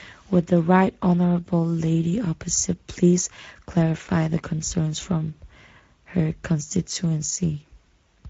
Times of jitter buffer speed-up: none

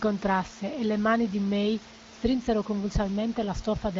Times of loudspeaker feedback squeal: none

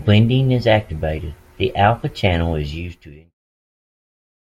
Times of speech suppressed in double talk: none

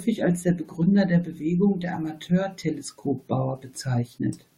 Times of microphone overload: none

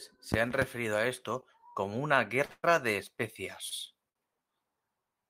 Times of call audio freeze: 2.51-2.65

